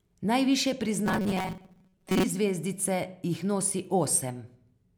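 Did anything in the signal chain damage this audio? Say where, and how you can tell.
Yes. From 1.06 to 2.23 s the speech collapses into a rigid, metallic buzz fixed at 188 Hz, a robotic sound from repeated short buffers, which likely points to a driver or buffer stage starving for data and looping a chunk of about 5.3 ms while most of the real audio in that stretch is skipped. A spectrogram would show flat, evenly spaced harmonics at multiples of 188 Hz, and the waveform would show near-identical cycles repeating.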